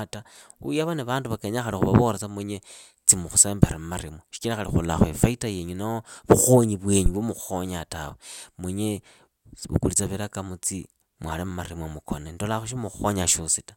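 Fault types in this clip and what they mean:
Phantom power thump: Phantom power or another supply was switched on or off on a live input, and the voltage step passed through the coupling capacitors. It lands at 7.06 s, between "ifaita yenyu noho vukhonyi" and "vwa mukhukhonyaa tawe munye". It is a deep, low thump lasting about 51 ms. It peaks at about -8 dBFS. It dies away quickly, with a decay of 12 ms.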